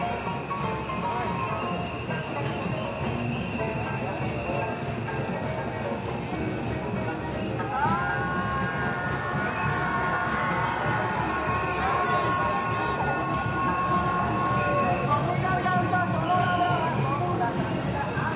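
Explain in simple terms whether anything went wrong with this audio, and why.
Nothing stood out as wrong when listening to this recording of sounds.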